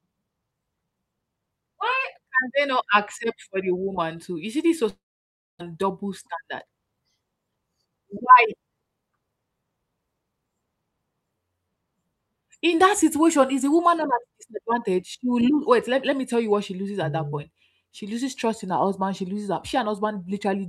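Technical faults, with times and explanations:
4.89 to 5.61 s, long network dropout: The stream likely stopped arriving for about 0.7 s. The receiver stretched the last sound into a fading buzz before near-silence took over for about 0.6 s. Sound resumes with about 0.4 s of speech lost.
5.69 to 7.01 s and 7.44 to 9.04 s, jitter buffer speed-up: The buffer was holding excess audio, so it repeatedly trimmed pitch-period-sized slices, roughly a tenth of a second in the first stretch and about 0.15 s in the second. Speech runs 8% then 10% faster at unchanged pitch, sounding hurried.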